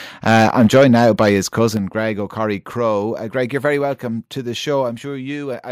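Microphone overload runs from 0.27 to 1.1 s. The speech peaks push about 6 dB past full scale, so their tops are flattened against the converter's ceiling, with around one sample in twenty pinned at the limit. The loudest syllables take on a harsh, crackling edge as the squared-off waveform spits out extra harmonics. The likely cause is a microphone input volume set too high for the talker's level.

Microphone volume stepped down occurs at 0.77, 1.77, 2.79, 3.81 and 4.83 s, roughly once a second. Each time, the voice and the background fall together in a single abrupt step, by about 2, 6, 2, 2 and 1 dB respectively. The first step lands in the middle of the distorted stretch. The likely cause is call software repeatedly turning down the device's input volume in response to the earlier clipping, so the level staircases downward instead of settling.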